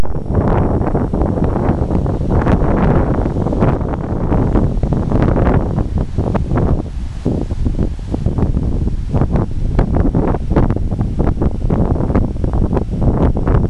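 At 3.76 s the level drops abruptly by about 4 dB. It stays down until 4.31 s, then returns just as suddenly. The sound and the background noise fall and rise together. That shared step is the mark of a sudden gain jump. The likely cause is a digital gain setting that was applied at one sample, with no ramp to smooth it. It was then removed the same way, so both edges are hard steps.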